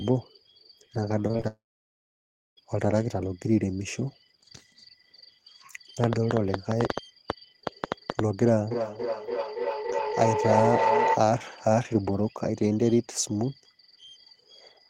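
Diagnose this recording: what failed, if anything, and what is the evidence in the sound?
Network packet loss hits first, from 1.27 to 1.46 s. Four short gaps, the longest 27 ms, remove about 80 ms of speech. Concealment stretches the last sound over each hole, covering nearly half that span. The result is choppy and robotic.

A long network dropout follows straight after, from 1.48 to 2.59 s. About 1.1 s of speech never plays. A brief concealment tail fades, then roughly a second of silence. This is likely a network outage in which nothing arrived.

Feedback howl runs from 8.71 to 11.28 s. A tone near 1 kHz builds until it matches the speech level. It pulses about every 300 ms. Microphone and loudspeaker share one room, and the acoustic loop through the call gains on every trip.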